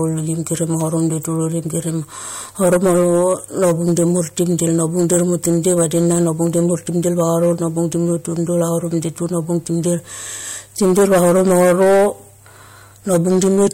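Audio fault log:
Throughout, hard clipping: the speech is pushed about 11 dB past what the signal path can pass, so the loudest peaks get sliced flat, around five percent of the samples. Those squared-off tops throw extra harmonics high up, giving a harsh fuzz on louder syllables.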